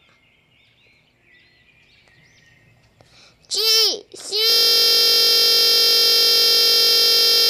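At 4.5 s the sound locks into a system hang loop that runs to the end. The machine or driver froze while the audio hardware kept replaying one 21.33 ms slice, which fits a 1024-sample buffer, so you get a steady buzz at about 46.9 Hz.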